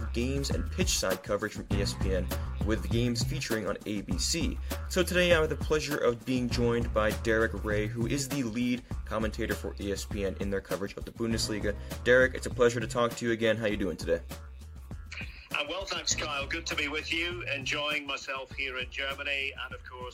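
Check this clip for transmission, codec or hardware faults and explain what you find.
No transmission, codec or hardware faults can be heard anywhere in the signal.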